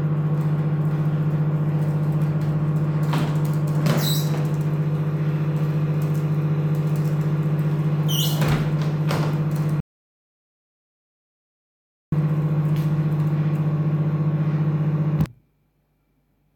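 At 9.80 s the sound stops dead and stays fully silent until 12.12 s, a gap of about 2.3 s. This is an audio dropout to silence: the input was likely lost, through a failed link or a brief disconnection, while recording carried on writing silence. What separates it from a quiet passage or a noise gate is the complete absence of room tone, with abrupt cuts at both edges rather than a fade. Whatever sounded during the gap is lost.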